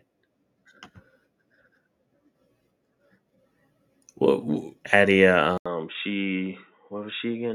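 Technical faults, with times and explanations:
5.58–7.55 s, input switched to a poorer device: likely a narrower-band input taking over. After an 80 ms gap, speech loses everything above 3.8 kHz, sounding dull, quieter and faintly noisier.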